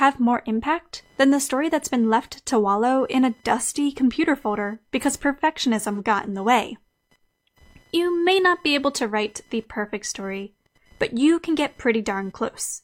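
Computer activity noise runs under the speech for the whole clip: a faint buzzing whine pulsing at around 1 kHz, about 40 dB below the speech. Processor and peripheral load currents disturb the shared audio ground, so the noise follows the computer's activity, not the talker.

From 5.94 to 6.00 s there is an AAC frame loss with concealment, about 43 ms long, consistent with a single missing frame. The decoder covers the gap by reusing the preceding spectrum, leaving a brief smeared, noisy or phasey patch in the speech.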